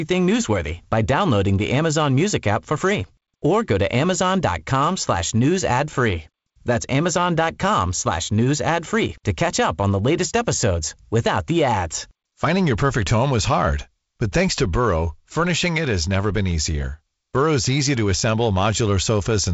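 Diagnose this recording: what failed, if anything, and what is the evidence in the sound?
No fault found in this recording.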